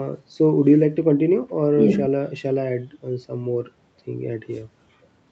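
Nothing goes wrong in this speech, which simply comes over a normal call path, with the microphone processing and the Opus codec leaving nothing above 8 kHz, and there are no faults to point to anywhere in it.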